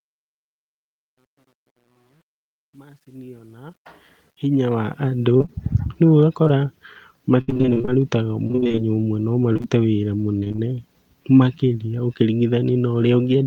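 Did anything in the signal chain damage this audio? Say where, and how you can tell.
Yes, two stages left marks. The fade-in from the start to 5.27 s has truncation distortion: the gain stage feeding it kept roughly 10 bits with no dither, so the quietest stretch, worst up to about 4.0 s, sounds gritty rather than rising cleanly. That's a sample-format or volume-processing problem.

Then from 5.37 s to 10.60 s you get repeated packet loss, the robotic sound. The network dropped or delayed packets over and over, and the receiver patched each hole by stretching the last bit of sound. That's 32 gaps, the longest 64 ms, with concealment covering about 13% of that stretch. The result is choppy and robotic, with small chunks missing.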